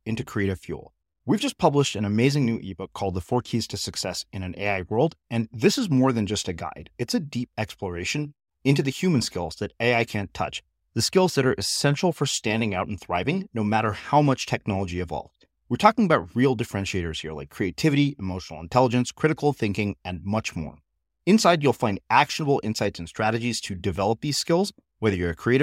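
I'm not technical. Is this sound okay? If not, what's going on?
Yes, this speech recording is fine. There are no technical faults to hear anywhere in it.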